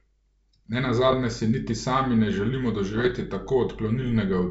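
Speech over a G.722 wideband link, where bit errors on the ADPCM link, at a rate of a fraction of a percent, corrupt the decoder's step size and predictor. Each error lingers as pops and rough level-jumping bursts, from 1.08 to 1.15 s before "si niti sami ne" and from 2.92 to 3.17 s after "niti sami ne želimo".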